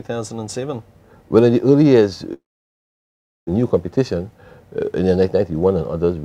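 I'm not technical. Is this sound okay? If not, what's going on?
No. At 2.33 s the sound smears into a fading buzz, then goes silent until 3.49 s, where it resumes with about a second missing. This is likely a long network dropout: the connection stopped delivering audio, and the player could only fill the gap.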